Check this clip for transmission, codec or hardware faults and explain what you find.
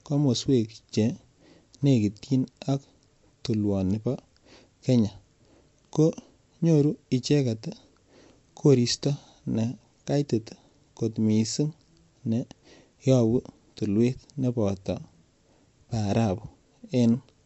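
One codec fault runs through the whole of this speech clip.

MP3 compression, throughout: the damage is plainly audible, and the likely cause is MP3 encoding at a low bitrate, which fits roughly 48 kbps. With so few bits, the encoder drops the top of the spectrum, leaving nothing above 7.9 kHz, and discards weak frequency lines that come and go between frames. The result is dull, lisping sibilants, a watery swirl around the speech, and softened consonant attacks.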